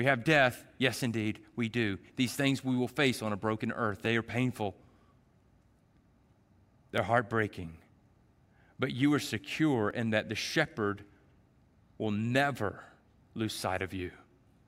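From 1.13 s to 14.29 s, a click recurs about every 1.46 s, roughly ten times in all, heard against the speech. These are clock drift buffer slips. The likely cause is two devices running on separate clocks that disagree by something near 700 ppm. The buffer between them slowly drifts until a short block of a few dozen samples is dropped or repeated. Each slip breaks the waveform and produces a brief click.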